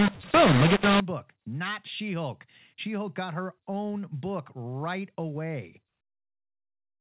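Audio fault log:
0.0–1.0 s, mu-law and A-law mixed up: the opening second of speech was coded with A-law but decoded as mu-law. The level mapping is scrambled, so samples land too loud or too quiet. Speech turns harsh and distorted, and quiet moments fill with noise.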